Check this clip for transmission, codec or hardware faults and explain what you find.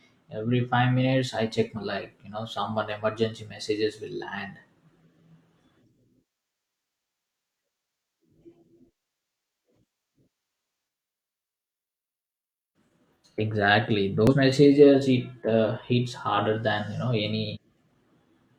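The clip has damaged data in a compressed stream, at 1.73–1.78 s (between "five minutes I check" and "like you know someone"), 4.84–4.89 s, 9.88 s, 14.27–14.33 s and 17.52–17.57 s. Corrupt frames make the decoder lose sync and hunt for the next header, producing brief chirps or blips.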